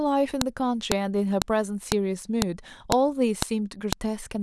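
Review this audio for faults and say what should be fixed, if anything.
Sharp clicks at 0.41, 0.92, 1.42, 1.92, 2.42, 2.92, 3.42 and 3.93 s, one every 0.5 s regardless of the speech, indicate a file header played as audio: each joined piece keeps its WAV header, whose bytes are decoded as a brief burst of samples. Strip headers from every piece after the first before concatenating or streaming.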